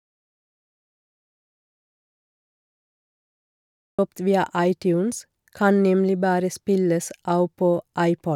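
From the very start until 3.99 s the clip is an audio dropout to silence: the recording opens already inside the gap, and the speech only enters partway through at 3.99 s. The likely cause is that the input was disconnected, failed or muted while the recorder kept writing silence. What separates this from a natural pause or a noise gate is the total absence of room tone or hiss, followed by speech arriving abruptly rather than fading in.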